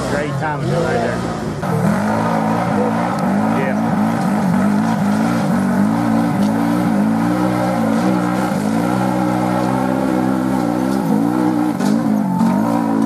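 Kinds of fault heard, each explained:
No kind of technical fault can be heard anywhere in the signal.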